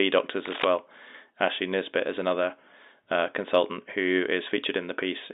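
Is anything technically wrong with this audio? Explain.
Yes. From 0.45 to 0.65 s there is cable scratch noise, roughly as loud as the speech: dense, irregular crackling bursts, likely from a worn connector or cable shifting and changing its contact resistance. Unlike a single click or a clean dropout, it rustles unevenly over the sound. The speech itself carries the narrow band of a telephone line.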